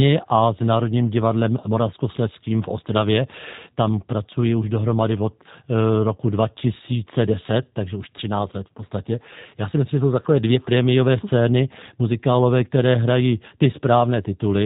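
The whole clip carries G.729 codec damage: speech sounds plainly rough and synthetic with nothing above 4 kHz, which fits an 8 kbit/s G.729A stream rebuilding the voice from a few pulses.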